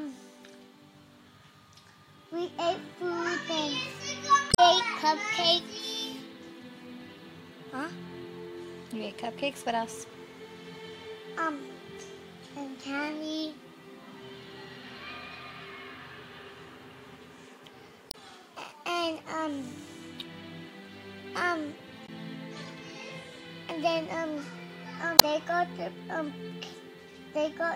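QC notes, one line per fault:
4.48–4.59 s, 18.08–18.15 s, 22.05–22.09 s and 25.16–25.23 s: damaged data in a compressed stream. Four short glitches break into the audio, lasting 40 to 110 ms each. Bytes in the encoded stream are corrupt at these points. The decoder misreads those frames and loses sync. It then hunts for the next valid frame header. The garbled frames come out as brief disruptions in the sound.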